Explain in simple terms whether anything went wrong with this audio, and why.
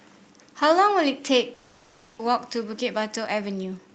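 Long network dropout, from 1.53 to 2.21 s: for about two thirds of a second the speech turns into a fading buzz that stands in for real sound, and when it returns, roughly 0.4 s of what was said is simply gone. This is likely a network hold-up: no audio reached the listener, so the receiver stretched out the last bit it had, then picked up again further along, skipping what never arrived.

Jitter buffer speed-up, from 2.29 s to the end: the speech runs about 9% fast at its normal pitch, so it sounds rushed. The receiver was holding more audio than it wanted. To catch up, it repeatedly snipped out tiny slivers of sound, about 150 ms in total, squeezing the remaining speech into less time.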